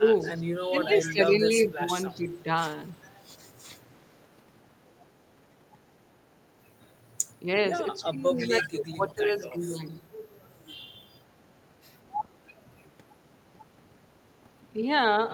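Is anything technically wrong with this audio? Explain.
Yes. Speech suppressed in double talk occurs at 0.0 to 0.08 s, 0.7 to 2.48 s, 2.98 to 3.03 s and 8.03 to 9.89 s. The voice dips by up to roughly 15 to 20 dB, thins or drops out in pieces. This is likely an echo canceller ducking the near talker while the far side also speaks.

Echo leak appears at 0.2 to 0.54 s, 0.94 to 1.13 s, 2.09 to 2.39 s and 8.38 to 8.66 s. It sounds like a copy of the voice 328 ms late, ranging from about 35 dB below the speech to about 10 dB below. The likely cause is a loudspeaker-side canceller letting residual echo back through.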